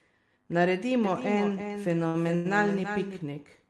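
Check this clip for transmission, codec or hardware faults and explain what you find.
Three faults stand out in this speech: a doubled audio track and two short stalls, heard over Opus call coding whose top end fits a 12 kHz limit.

From 1.04 to 3.22 s, a doubled audio track: a second, slower capture path likely mixes in a dry copy, about 10 dB quieter and roughly a third of a second late, starting and stopping abruptly.

At 2.07 to 2.16 s and 2.35 to 2.47 s, there are two short stalls from late packets: the jitter buffer ran dry, so the receiver held the last sound for 67 ms, then 98 ms. Those sounds drag with a slight buzz or dip, and nothing is lost.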